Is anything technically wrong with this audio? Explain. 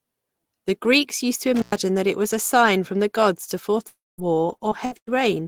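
Yes, there are four faults in this speech clip.

From 1.55 to 1.78 s, just after "used to", there is an intermittent contact. A loose connection opens for about 104 ms. The sound cuts out with crackle at both edges, leaving faint hiss, before "that it was a" resumes.

From 3.87 to 4.36 s, after "from the gods to", the audio stops. The last sound is stretched into a fading buzz or hiss, then about 200 ms of silence follows. About 300 ms of speech never returns. The likely cause is a long network dropout.

At 4.18 s there is a lost packet rebuilt from error correction. The following packet carried a low-bitrate copy of this 20 ms stretch, and the decoder played it. There is no gap, but the brief patch sounds rougher and noisier.

From 4.57 to 5.09 s, repeated packet loss produces robotic sound. Four gaps appear in quick succession, the longest about 97 ms. Each is filled by extending the last sound, so roughly 38% of the stretch is patched. 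The result is choppy, with pieces missing.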